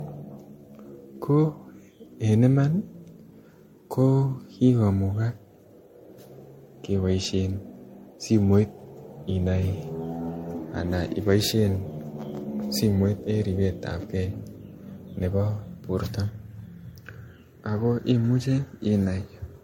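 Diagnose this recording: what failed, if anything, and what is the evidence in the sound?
The codec stage is at fault throughout. The whole 20-second speech clip has a swirly, hollow texture with smeared consonant onsets, and nothing is present above 16.7 kHz, which fits a 64 kbit/s MP3. The damage is heavier than one pass at that rate would leave, so the likely cause is generation loss from about five successive MP3 decode and re-encode cycles. Each pass requantises on a shifted frame grid, stacking fresh noise and spectral holes on top of the last.

At the driver or buffer stage, from 15.31 to 16.01 s the speech suddenly runs 5.3% fast and rises about 89 cents, close to a semitone, then snaps back to normal speed and pitch. Because speed and pitch move together and the change starts and ends abruptly, this is likely a drift correction step: clock-matching software briefly changed the playback rate in one jump to rebalance its buffer, then restored the nominal rate.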